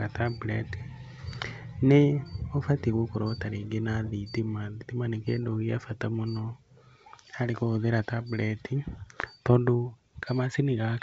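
No faults present: the speech sits on a G.722 wideband telephone path at 64 kbit/s, with the band ending near 7.8 kHz.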